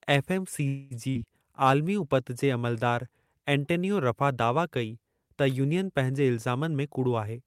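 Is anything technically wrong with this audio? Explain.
Yes. From 0.67 to 0.94 s the speech stops advancing and the last sound is drawn out as a fading buzz or hiss for roughly 0.23 s, then resumes exactly where it left off. This is likely a call audio freeze: delayed packets emptied the jitter buffer, so the receiver stretched the sound and added delay rather than dropping anything.

At 1.10 to 1.18 s a burst of packet loss occurs. Several packets never arrived in time, so the receiver extended the preceding sound for about 52 ms as a dying buzz or hiss, then jumped forward, leaving about 60 ms of speech missing.

From 6.50 to 7.45 s a jitter buffer speed-up is audible. Too much audio had built up, so the receiver trimmed short pitch-period slices repeatedly, cutting around a tenth of a second. The speech runs at about 112% speed with unchanged pitch and sounds hurried.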